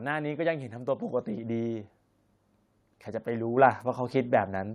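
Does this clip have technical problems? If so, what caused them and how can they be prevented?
Yes. The microphone volume is stepped up twice: at 1.02 s the level rises by about 5 dB, and at 3.57 s by about 4 dB more. Each time, the speech and the background noise get louder together in a single abrupt step rather than a gradual ramp. That points to the call software judging the input too quiet and raising the device's input volume directly. To prevent it, disable automatic microphone level adjustment and set the input gain manually beforehand.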